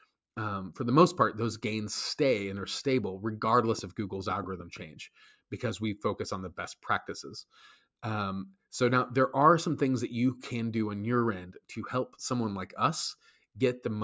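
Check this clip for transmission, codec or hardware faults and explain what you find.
Two faults are present, with the call microphone processing limiting the audio to nothing above 8 kHz.

From 3.45 to 4.83 s there is a train of clicks: around ten similar pulses, about 5.9 per second but unevenly spaced, peaking a few dB above the sound. This is likely interference or a struggling interface. Unlike a single dropout, the clicks repeat and tick through pauses too.

Between 13.19 and 13.57 s the noise suppressor cuts the sound, mistaking it for noise and pulling it down by up to about 13 dB over roughly a fifth of a second. Sustained or decaying parts sink or end early, which sets it apart from a clean gap or mute.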